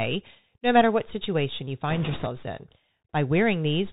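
A speech recording that sounds boxy and narrowband throughout, with nothing above 4 kHz, scratchy s sounds and a granular hiss, the mark of the Bluetooth CVSD headset codec at 64 kbps. From 1.90 to 2.27 s a rushing crackle rises over the speech without sharp clicks, caused by bit errors on a Bluetooth voice link at a rate of a few percent.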